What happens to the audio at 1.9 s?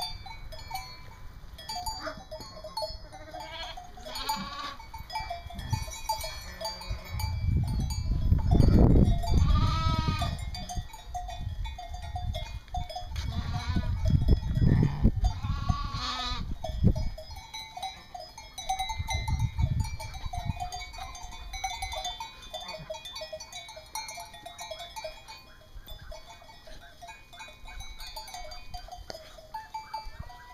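At 1.9 s the audio is inside a stretch of channel delay (comb filtering), from 1.80 to 3.40 s. One channel lags the other by a fraction of a millisecond, so the mono sum cancels near 3 kHz and its odd multiples. It sounds hollow and phasey, and a spectrogram shows fixed, evenly spaced dark notch bands.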